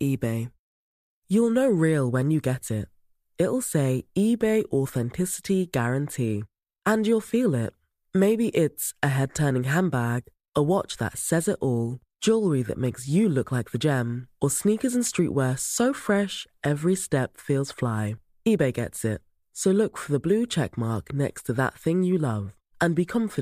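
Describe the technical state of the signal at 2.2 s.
At 2.2 s the signal is intact, with no audible fault at that moment.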